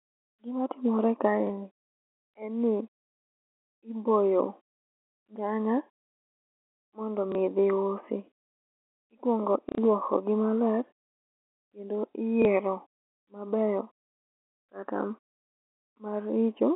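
At 1.47 s the speech catches for 30 ms, and the same blip returns at 7.32 s and 12.42 s. That's packet loss with the last packet repeated: the receiver filled the gap by replaying the previous chunk, which fits a single 30 ms packet. At 9.69 s it runs for 90 ms, three repeats in a row, giving a brief robotic buzz near 33 Hz. All of it sits inside a narrow telephone-band G.711 line.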